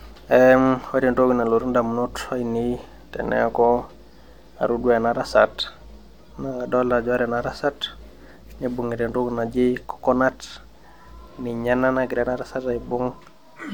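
A short bit of recorded speech, and there's nothing technically wrong with it that I can hear anywhere in the clip.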